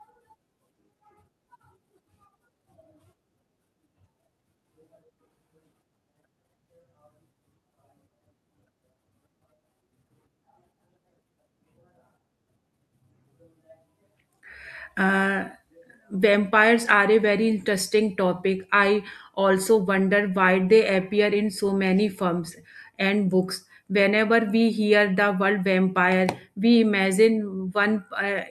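No technical faults can be heard anywhere in the speech, so there is nothing to place in time order.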